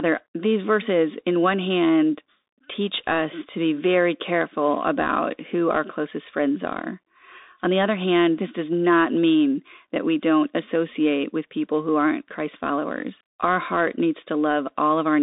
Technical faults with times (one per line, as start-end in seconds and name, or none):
0.00-15.23 Bluetooth CVSD headset codec